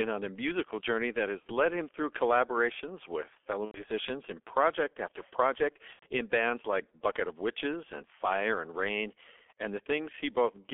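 Throughout, the speech sounds muffled and hoarse, with smeared consonants and nothing above 3.4 kHz: heavy G.723.1 codec damage at 6.3 kbit/s on a narrow telephone line. VoIP packet loss concealed by the speech codec then causes brief fading smears, buzzy or noisy, at 1.40–1.51 s, after "a musical journey that"; at 3.65–3.83 s, after "through collaborations with fellow"; and at 5.93–6.05 s, before "in bands like". The decoder stretched its last sound across 60–90 ms gaps, which fits two or three lost frames.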